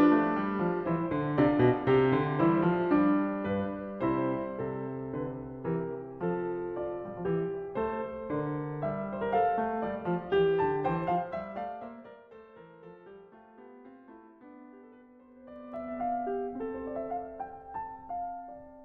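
At 11.0 s the music drops by roughly 25 dB through zipper noise, the fade applied in unsmoothed 1 dB jumps about thirty times a second, each leaving a tiny click. Those clicks run together as a fine ticking until 12.24 s, and it comes back as the level climbs from 15.24 to 15.96 s.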